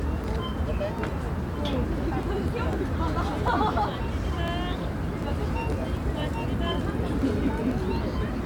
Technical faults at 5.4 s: periodic USB or driver dropouts

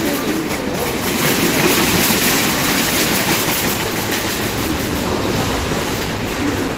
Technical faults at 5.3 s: none

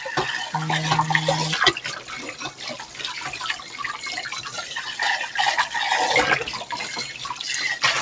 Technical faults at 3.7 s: noise suppressor applied to music or sounds; sound cut by the noise suppressor

